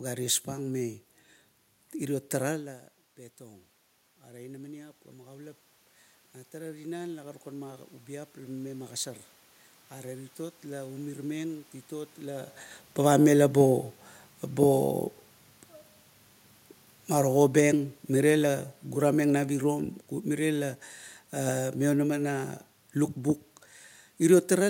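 From 2.58 to 11.13 s there's automatic gain rising: the voice drops about 17 dB as the talker moves away, and the AGC climbs about 11 dB, swelling voice and room noise together. Then from 17.14 to 22.3 s the automatic gain falls by about 5 dB, so the speech and its background sink gradually together.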